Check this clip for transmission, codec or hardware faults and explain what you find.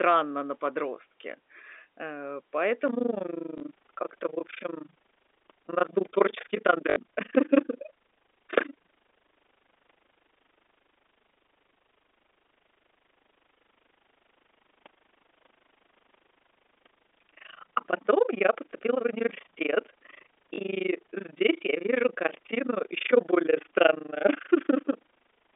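Two faults stand out in the speech, both heard over a telephone-band path that sounds consistent with G.711 coding.

Overlap-add ripple runs from 2.88 s to the end. The audio appears to have been split into windowed frames and rejoined with an overlap whose windows do not add up to a steady gain, so the level swings once per frame. The dips reach about 60 dB and repeat at around 30 Hz. The result is a rough, fast tremolo riding on every syllable for the rest of the clip.

Packet loss with last packet repeated occurs at 3.58 to 3.60 s, 6.90 to 6.96 s and 20.54 to 20.58 s, with gaps of 20, 60 and 40 ms. That pattern fits 20 ms packets, one going missing in the first event, three in a row in the second and two in the third. The receiver filled each gap by replaying the last good packet. The longer runs also produce a brief 50 Hz buzz, which is heard as a short mechanical stutter.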